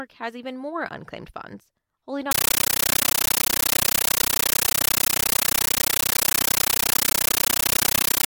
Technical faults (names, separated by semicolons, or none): compressed stream played as audio